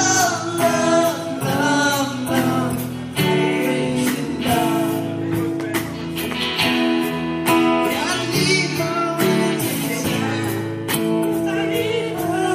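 Nothing here jumps out as a technical fault; the whole clip just runs along without any glitch worth pointing to.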